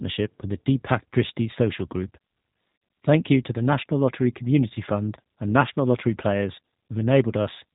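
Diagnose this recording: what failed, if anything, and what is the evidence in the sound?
The codec stage is the culprit: plainly audible G.729 damage, rough and slightly synthetic speech with nothing above 4 kHz, which fits an 8 kbit/s pulse-coded frame model.

There's VoIP packet loss concealed by the speech codec at 2.76 to 2.82 s. About 60 ms goes missing, likely two packets, so the decoder stretches the last frame into a fading buzzy tone or coloured noise.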